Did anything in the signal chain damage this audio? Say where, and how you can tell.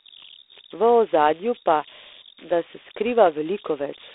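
Yes. An idle tone near 4 kHz runs through the whole speech clip, with grainy noise about 19 dB below the speech. These are converter idle tones: an undithered delta-sigma converter settles into repeating bit patterns at low input, producing tones whose pitch depends on the input's offset.

There is also a harsh, rasping hiss that rises and falls with the speech level, and the band is limited to roughly 300 Hz to 3.7 kHz. This comes from the G.726 ADPCM codec at 24 kbit/s. Its coarse three-bit prediction residual makes plainly audible level-following noise.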